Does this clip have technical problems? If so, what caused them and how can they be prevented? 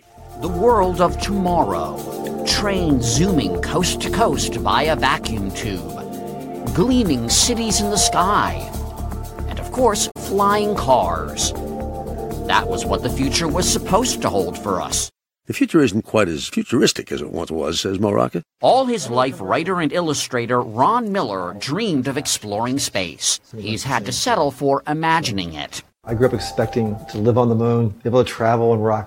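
Yes, there's a short burst of damaged data in a compressed stream from about 10.07 to 10.17 s: a brief glitch where the decoder hits corrupted frames, loses sync and hunts for the next valid header. To prevent it, carry the stream over a checksummed, error-checked transport.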